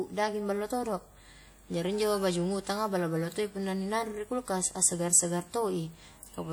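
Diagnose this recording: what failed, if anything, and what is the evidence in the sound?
The codec stage failed, throughout the speech. Plainly audible ringing and a washy, breathing hiss trail each sound, with nothing above 20.1 kHz. This is likely WMA compression at a rate fitting about 48 kbps, whose long transform blocks smear quantisation noise across tens of milliseconds.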